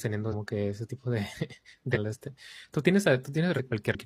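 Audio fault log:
0.28–0.34 s, 1.91–1.97 s, 3.53–3.60 s, 3.90–3.95 s: damaged data in a compressed stream. Brief glitches of about 50–65 ms each, the first just before "que ese tipo de". Corrupt frames make the decoder misread them and resync. Unlike a plain dropout, the damage lies in the coded data rather than the signal itself.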